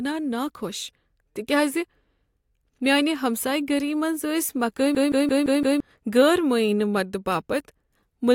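A system hang loop runs from 4.95 to 5.80 s in this speech clip. One 170.67 ms slice repeats five times at 5.86 Hz, a machine-gun stutter from hardware replaying a frozen ring buffer that fits 8192 samples. About a second is lost before "غیر معینہ".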